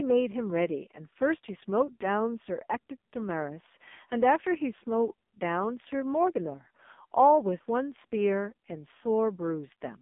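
Throughout the clip, the speech carries AMR narrowband mobile codec damage. The line passes only about 200 Hz to 3.6 kHz, with nothing above 3.7 kHz. Heavy coding makes the voice buzzy and synthetic, which fits a low bitrate near 5.9 kbps.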